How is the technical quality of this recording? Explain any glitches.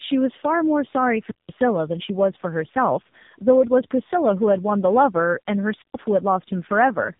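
The quality is poor. The speech has a rough, band-limited codec sound from start to finish, and it drops out briefly twice.

Tandem speech coding affects the whole clip. Nothing is heard above 3.8 kHz. The voice sounds rough, muffled and warbly, which fits two low-rate speech codecs in a row. The second coder had to compress output that the first had already degraded.

Wireless microphone squelch dropout occurs at 1.24 to 1.53 s and again at 5.77 to 5.96 s. Hiss rises, then the sound goes nearly silent for about 180 ms and 120 ms. The radio signal faded, so the receiver's squelch muted the output.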